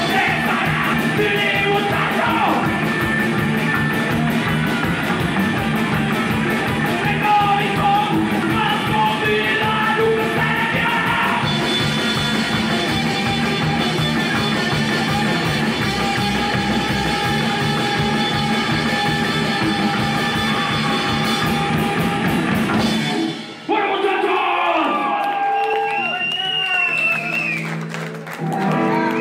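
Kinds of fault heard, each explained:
Compressed frames skipped: a run of whole compressed frames never gets played, so the audio jumps forward about 150 to 200 ms each time, at 0.92, 19.32, 21.68 and 25.73 s.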